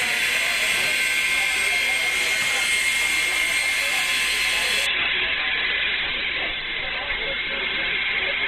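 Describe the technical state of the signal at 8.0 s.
At 8.0 s the sound is dull, with nothing above 4.1 kHz. From 4.86 s to the end, an adaptive stream at a lower bitrate switched suddenly, without a gap, consistent with a drop to a low-rate codec setting.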